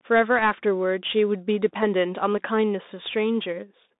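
Speech squeezed through a Bluetooth CVSD headset codec the whole way: band-limited to roughly 200 Hz to 3.7 kHz, with plainly audible granular, scratchy one-bit delta grit, which fits a 64 kbps link.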